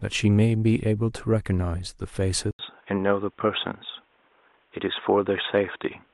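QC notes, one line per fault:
2.51–6.13 s, input switched to a poorer device: after an 80 ms gap the speech turns dull and boxy, with nothing above 3.8 kHz and a new faint noise floor well below the speech, at about the same loudness, likely from recording switching to a narrower-band microphone or headset.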